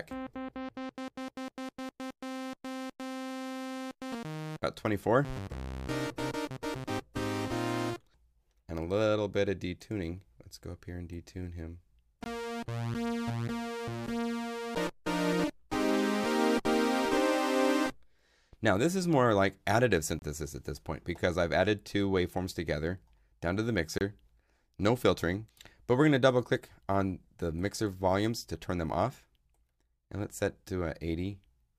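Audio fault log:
12.24–12.26 s, 20.19–20.22 s and 23.98–24.01 s: block of digital silence, three short dropouts of about 20, 29 and 26 ms where the sound drops out, most likely because the output buffer wasn't filled in time. With no fade in or out, the sound cuts out and back abruptly, so they come across as short holes.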